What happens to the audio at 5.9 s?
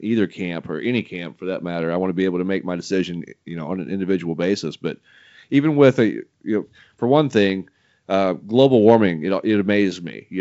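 At 5.9 s the audio is intact, with the speech carried as normal G.722 wideband telephone coding at 56 kbit/s and nothing present above about 7.7 kHz.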